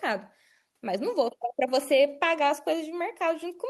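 No faults can be heard anywhere in the recording.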